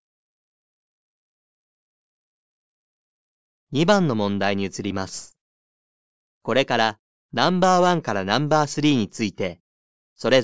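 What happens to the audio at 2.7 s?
Nothing goes wrong at 2.7 s; the audio plays through that moment intact, with no dropout, click, distortion or other fault.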